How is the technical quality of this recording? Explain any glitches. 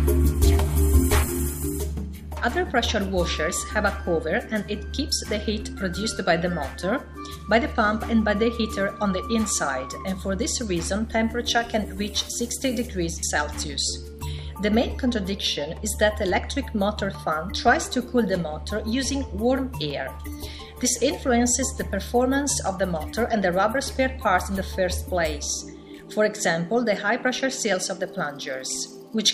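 Nothing stood out as a technical problem on listening, and no glitches could be heard anywhere in the recording.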